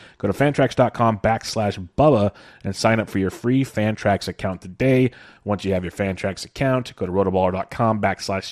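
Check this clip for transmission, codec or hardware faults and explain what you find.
One codec fault runs through the whole speech clip. MP2 compression is the likely cause. It sounds dull, gurgling and granular. Starved sub-bands drop out and coarsen, which fits a rate near 80 kbps.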